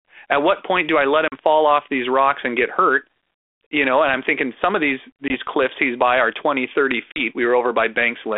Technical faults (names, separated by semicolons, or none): packet loss on an ADPCM call